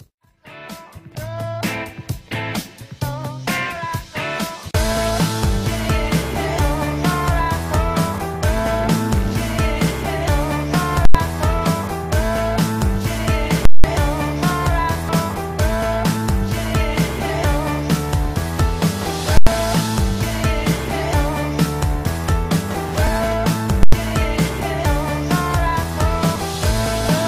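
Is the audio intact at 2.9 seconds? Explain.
Yes, the audio is intact at 2.9 seconds, with no fault at that moment.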